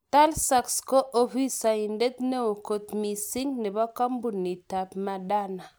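Nothing along the way in this bit of speech stands out as a technical fault, so there's really nothing to point to at any moment.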